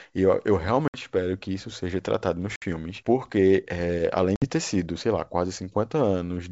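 Speech over G.722 wideband with three ADPCM packet-loss dropouts: 0.88–0.96 s after "eu eu", 2.56–2.64 s after "isso seja tratado nos", and 4.36–4.49 s before "ter sido sei lá". Each is a hard 60 ms silence, about three packets' worth. Afterwards the decoder's predictor and step size are out of sync, so the sound returns slightly distorted before settling.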